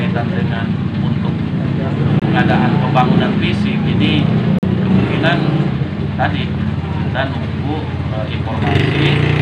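At 2.20 s the sound cuts to silence for about 21 ms, and at 4.59 s a longer gap of about 43 ms follows, ending at 4.64 s. After both holes the audio picks up as if it had kept playing underneath. This pattern is likely a Bluetooth dropout, where packets missed their delivery window on the wireless link and were discarded. The durations fit the loss of one and then two codec frames.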